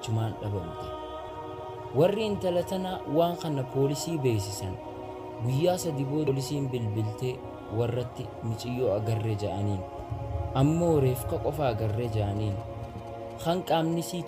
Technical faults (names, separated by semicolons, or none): damaged data in a compressed stream; GSM signalling bursts